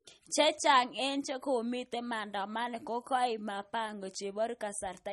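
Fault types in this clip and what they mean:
MP3 compression: likely low-bitrate MP3, around 32 kbps; nothing above 11.7 kHz, so the spectrogram shows a flat ceiling there, with flickering holes where weak components drop out.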